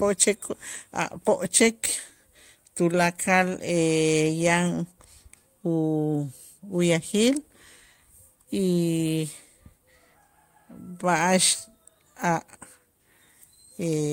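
Nothing here catches the ear as a technical problem; the speech runs along without any audible glitch, dropout or distortion at any point.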